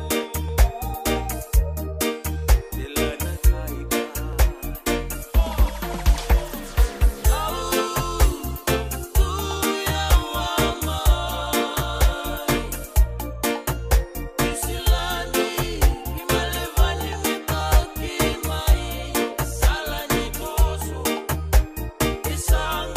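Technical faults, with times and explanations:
0.49, 4.33, 9.57, 14.99, 17.61 and 18.72 s: dropped samples. The stream likely lost a tiny run of samples each time, about 0.7 ms, so the waveform leaps straight to a later value. Nothing audible is removed, but each jump produces a single sharp click.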